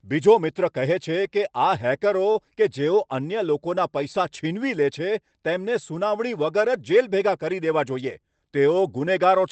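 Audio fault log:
2.31–2.37 s, short stall from a late packet: a packet arrived late and the jitter buffer ran dry, so the receiver stretched the last sound by 32 ms before resuming. Nothing is lost, but one sound lingers slightly too long with a faint buzzy smear.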